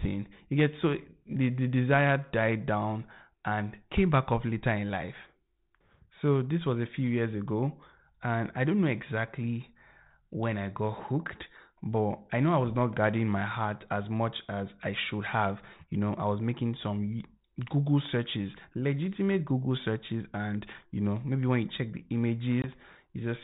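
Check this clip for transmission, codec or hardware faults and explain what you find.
One transmission fault is audible, on a G.726 ADPCM call at 32 kbit/s whose light coding hiss and telephone bandwidth are normal for that codec. Packet loss on the ADPCM call occurs from 22.62 to 22.70 s, right after "when you check the". About one packet, 20 ms of audio, goes missing and is filled with silence, leaving a hard-edged gap. The decoder's adaptive predictor and step size then lose sync with the sender, so the speech resumes slightly distorted until it resettles.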